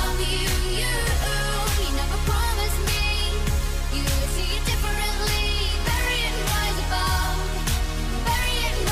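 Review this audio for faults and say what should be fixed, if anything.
No faults are audible; nothing here needs fixing.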